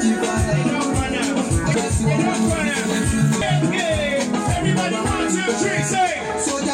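At 1.74 s and again at 3.42 s the audio leaps forward, losing roughly seven tenths of a second each time. These are compressed frames skipped: whole blocks of encoded audio were missing or rejected as damaged, so the decoder resumed further on, in steps that fit frames of about 93 ms. Unlike a dropout, no silence is inserted; the audio simply jumps ahead.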